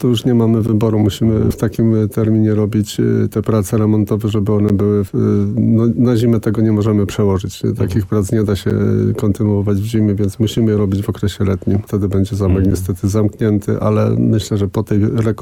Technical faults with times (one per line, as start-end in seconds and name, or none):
0.67 gap between stream segments
4.69 gap between stream segments
8.70 gap between stream segments
12.71 gap between stream segments